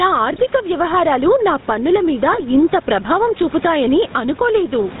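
Throughout the recording, the input gain is likely set far too high, so a fast limiter keeps clamping the level each time the speech gets loud. The level swings by around 10 dB. The room noise sits about 29 dB below the speech. This gain pumping makes loud and quiet passages sound squashed toward the same level.

The speech also runs through the GSM full-rate codec for its whole length, and the damage is plainly audible. The coder rebuilds the voice from a vocal-tract filter driven by sparse, regularly spaced pulses, and everything above 4 kHz is cut off. The result is a dull, band-limited sound with the typical buzzy, gravelly roughness of early GSM calls, consistent with its 13 kbps rate.

From 0.32 to 0.45 s, just before "వ్యవహారాలు నా పన్నుల మీద", GSM bit errors reach the decoder. The burst fits about six corrupted 20 ms frames. The filter, pitch and gain values decoded from those bits are wrong, so the spectrum bends and the level jumps, and the speech breaks into squawks and gargling pops. 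A second, similar burst of GSM bit errors follows from 2.32 to 2.42 s, right after "వ్యవహారాలు నా పన్నుల మీద", with the same garbled, squawking break.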